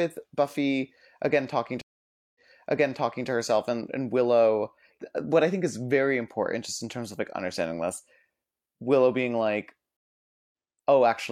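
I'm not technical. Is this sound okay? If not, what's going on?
No. Two stream reconnects: the connection drops, playback goes quiet for about half a second, then picks back up at the wrong spot. After "again talking" (1.81 to 3.28 s) it replays roughly 0.93 s before "to herself and and". After "being like" (9.97 to 10.51 s) it skips about a tenth of a second ahead.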